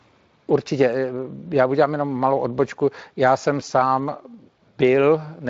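No faults can be heard in this speech: it carries the light coloring of a Speex codec at a fairly generous setting, with nothing above about 7.6 kHz.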